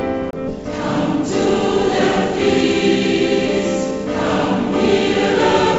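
Right at 0.30 s there's a CD skip. The laser jumps tracks, so you get a short mute, around 30 ms, before playback resumes somewhere else on the spiral. At 0.48 to 0.50 s comes a skip ahead. Something like 0.7 s is dropped outright and the two edges butt together with no gap or fill. From 0.58 to 1.78 s the jitter buffer speed-up kicks in. It trims tiny pitch-period chunks, around 70 ms in total, so the sound runs about 6% fast at the same pitch and feels a bit rushed. All of this sits on a call path where nothing comes through above 8 kHz, which fits wideband G.722 at around 64 kbps.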